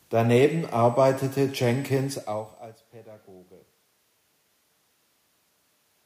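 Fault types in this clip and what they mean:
USB whine: Current drawn by the USB bus in 125-microsecond microframes leaks into the audio path. A fixed-pitch whine at 8 kHz, strongest at 16 kHz, sits about 25 dB below the speech from 0.50 to 2.85 s.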